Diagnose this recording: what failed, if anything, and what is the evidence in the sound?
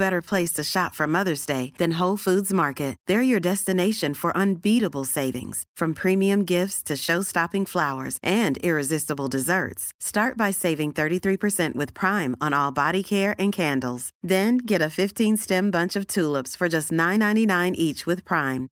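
Nothing failed; no faults heard.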